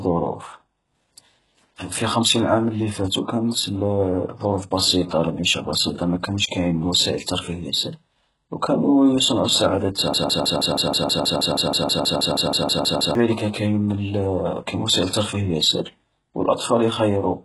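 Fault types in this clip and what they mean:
HE-AAC compression: The treble is likely rebuilt by spectral band replication, with copied upper bands that sound gritty and lispy on s sounds and stop near 11.5 kHz. The heavy smearing fits a bitrate around 12 kbps. A plain low-pass would leave the treble dull rather than synthetic.
Broken-record loop: After "وكانوا يصنعو السعادة", a fragment of about 160 ms repeats exactly, back to back, from 10.14 to 13.15 s. This likely comes from a stalled stream resending its last fragment. Unlike an echo, the copies never fade, and the audio that should have played there is lost.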